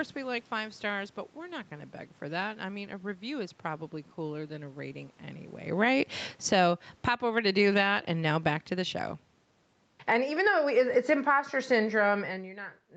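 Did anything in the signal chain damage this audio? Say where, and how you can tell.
Yes. From 5.67 s, just after "cooler than a rating", the call processing's automatic gain falling pulls the level down by about 14 dB until 12.66 s. The room background sinks with the speech, so it isn't a talker simply moving back: the gain control itself is turning down.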